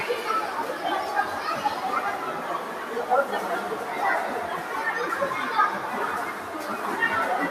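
A speech-tuned noise suppressor runs on these sounds throughout, treating sustained tones and tails as noise and pulling them down by around 5 dB, so the audio pumps.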